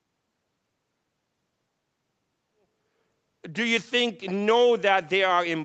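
No technical faults can be heard in this speech recording; the level rises in a smooth, deliberate fade-in that is complete by about 3.5 s, and the band above 8 kHz is empty, as expected from a call's microphone processing.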